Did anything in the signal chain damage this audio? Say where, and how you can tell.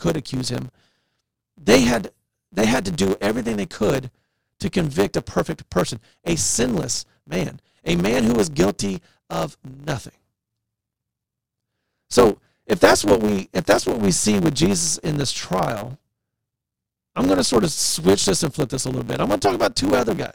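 Yes. The driver or buffer stage shows a block size mismatch (truncated) throughout: a steady 100 Hz buzz sits under the speech, which runs about 1.09 times fast at near-normal pitch. Each block loses its tail because the writer's blocks exceed the reader's, clicking at the block rate.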